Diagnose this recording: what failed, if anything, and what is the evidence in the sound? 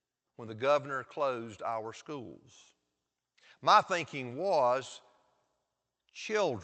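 Nothing failed: the speech comes through the WebRTC call path with Opus coding that fits a 32 kbps setting, its top end stopping at 8 kHz as that codec's bandwidth would give, and no stage from capture through call processing, network and playback shows a fault.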